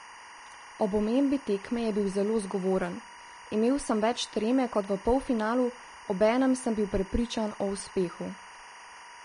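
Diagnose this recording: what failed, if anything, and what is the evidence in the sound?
A timecode bleed in the analogue wiring runs through the whole recording: a steady chirping warble behind the speech, switching between tones near 1 kHz and 2 kHz at about 20 dB below the speech. Linear timecode on an adjacent track or cable has leaked into the audio path, and the rhythm of the chirp fits a 23.976 frame/s code. Mains hum is a low, unchanging drone, and a single interfering tone holds one pitch. This sound instead flips between two pitches in a regular data-like pattern.

The codec stage shows damage throughout. Nothing is present above 10.6 kHz, and the upper speech band sounds hissy and grainy, with consonant attacks smeared. This is likely Vorbis compression at a low bitrate, consistent with around 32 kbps. The encoder quantised the treble so coarsely that fine detail turned into noise of similar energy. 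A plain low-pass filter would leave a clean, dull top end, whereas here what remains of the top end is rough and noisy.

At 7.80 s there is a repeated buffer at the driver or buffer stage. When fresh audio failed to arrive, the device replayed its last block four extra times. This fits a 64-sample buffer of about 1.33 ms and loses roughly 5 ms of audio. Because the block is so short, the repeats are heard as a tiny buzz rather than a stutter. A dropout would leave a gap of silence, and a lone click would not have this brief pitched, periodic quality.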